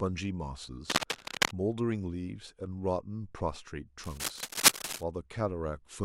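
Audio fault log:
0.89–1.51 s and 4.04–5.03 s, cable scratch noise: a worn cable, connector or control was likely being moved, making its contact resistance jump erratically. This laid dense, uneven bursts of crackle over the speech, a few decibels louder than it, heard as scratching and rustling during both spans.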